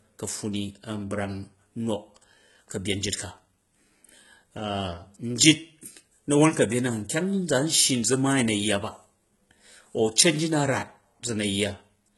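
Speech, likely passed through heavy HE-AAC compression at a rate fitting about 16 kbps: treble above 11.8 kHz is missing, and rebuilt highs make sibilants gritty and metallic throughout.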